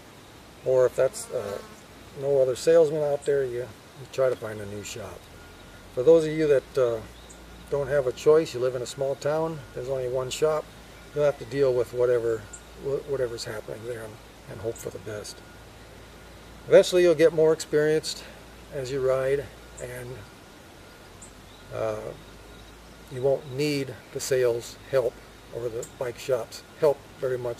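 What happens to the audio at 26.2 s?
At 26.2 s the audio is inside a stretch of sample clock jitter that runs from 23.36 s to the end of the clip. The converter's timing wanders by something on the order of 10 microseconds, so each sample lands slightly off its moment. Steep, fast-moving parts of the waveform suffer most, adding a gritty hiss roughly 25 dB below the signal. Unlike steady background noise, this roughness follows loud, bright passages and disappears in silence.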